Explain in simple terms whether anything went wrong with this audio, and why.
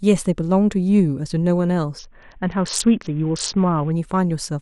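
A Bluetooth SBC bit pool drop runs from about 1.99 to 3.92 seconds. Over that stretch the wireless link seems to have become crowded, so the phone squeezed the speech into far fewer bits to keep it from cutting out. With so little data, the highest frequencies get almost nothing and everything else is stored roughly. That is why the speech turns dull and muffled, with a gritty, sandy noise, until the link recovers just before 4 seconds.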